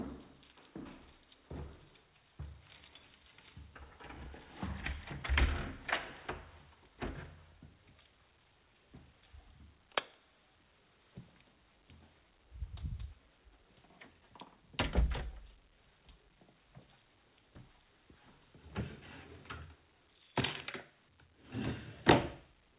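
Sounds, with no technical faults to report.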